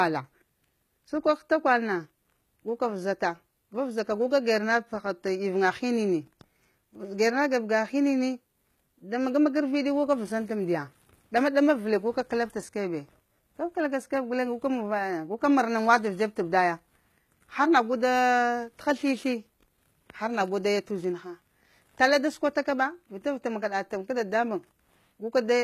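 Throughout, the speech shows plainly audible HE-AAC compression: treble rebuilt by band replication sounds gritty and lispy on s sounds, with nothing above 14.9 kHz, likely a low-bitrate encode.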